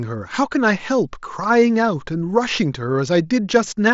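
No technical faults are audible.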